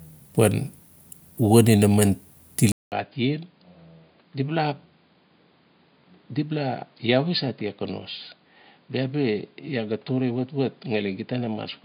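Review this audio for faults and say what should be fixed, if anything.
At 2.72 s a 200 ms gap is followed by duller, slightly quieter speech with nothing above 4.9 kHz and a faint new hiss. This is likely an input switched to a poorer device, not a codec narrowing its band, because of the gap and the changed noise. Lock the recording to one input device and turn off automatic switching to headset call profiles.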